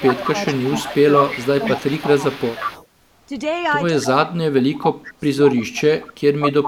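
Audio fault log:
0.0–2.61 s, 3.27–3.34 s, 3.9–5.76 s and 6.49–6.68 s: speech suppressed in double talk. The voice dips in pieces, by about 10 dB in the first two stretches, about 25 dB across 3.9–5.76 s and about 30 dB at the very end. This is likely an echo canceller that could not tell this talker from loudspeaker echo while both sides spoke, so it turned everything down. Unlike a network dropout, the sound dips and returns rather than vanishing with a click.
0.0–2.87 s and 4.76–6.49 s: echo leak. A copy of the voice trails it by 182 ms, about 10 dB below the direct sound in the first stretch and about 5 dB below in the second. The likely cause is a loudspeaker-side canceller that let part of its microphone pickup through. It differs from room reverberation because the copy is a distinct, fixed-delay repeat, not a smooth decaying tail.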